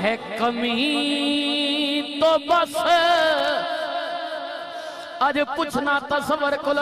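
Nothing is technically wrong with the audio.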